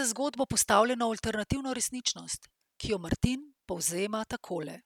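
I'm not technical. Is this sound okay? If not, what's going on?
Yes, this recording sounds fine, with no problems to hear.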